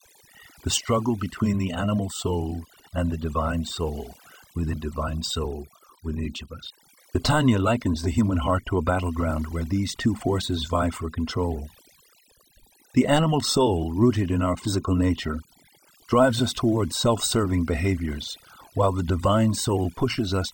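From start to finish the speech carries overdone noise removal. A noise reducer set far too aggressively pulls individual frequency bands down hard whenever their level sits near its noise estimate, and the softer parts of the voice fall below that line and are removed along with the noise. Between phrases the background drops and breaks up into twinkling specks.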